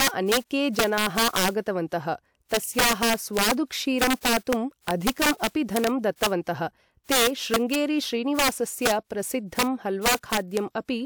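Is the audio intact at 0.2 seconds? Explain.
No. Integer overflow runs through the whole clip, including 0.2 seconds. The speech is driven about 8 dB past the integer limit. Each peak over it wraps to the opposite sign instead of clipping. About 2 percent of samples flip, giving violent, sharp cracks on loud moments.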